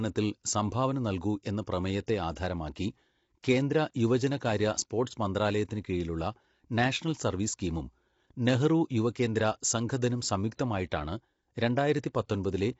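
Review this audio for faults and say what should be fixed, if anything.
Throughout the clip the speech has likely passed through low-delay AAC compression of the AAC-ELD kind used for video calls, at a bitrate that sounds near 24 kbps. Its short frames cannot separate the pitch harmonics finely, so the voice comes out rough and grainy, with noise filling the gaps between harmonics, and nothing is present above 7.8 kHz. The damage is plainly audible from start to finish. To prevent it, raise the call bitrate or switch to a codec setting with longer frames when low delay is not essential.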